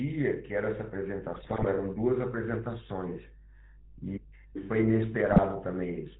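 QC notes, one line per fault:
throughout, mains hum: a steady low drone at 50 Hz sits under the speech at about 20 dB below it, present in every pause. Power-line current leaking into the signal path, through a ground loop or a nearby transformer, produces this constant tone.
throughout, GSM full-rate codec: the speech sounds buzzy and gravelly, with nothing above 4 kHz and plainly audible coding damage. The 13 kbps codec rebuilds the voice from a vocal-tract filter fed by sparse, regularly spaced pulses, which produces that rough, band-limited texture.
1.34–1.65 s and 5.25–5.40 s, GSM bit errors: the speech breaks up into squawks, pops and gargling for these two stretches. Corrupted bits, at around 2.7% error rate, reached the decoder and scrambled the filter, pitch and gain values for several frames in a row.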